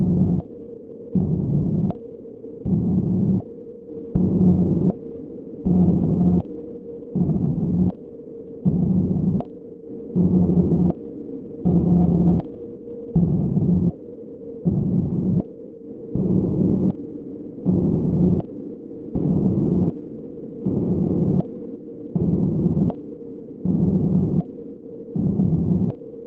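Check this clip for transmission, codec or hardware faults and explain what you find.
No faults found.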